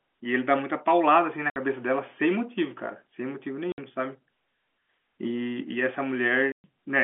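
Packets were dropped on the way to the receiver, which played silence where they should have been: packet loss filled with silence. The speech cuts out abruptly at 1.50 to 1.56 s, 3.72 to 3.78 s and 6.52 to 6.64 s, gaps of 60, 60 and 120 ms that fit runs of lost 20 ms packets. Each hole has hard edges, heard over the narrow telephone band of the G.711 line.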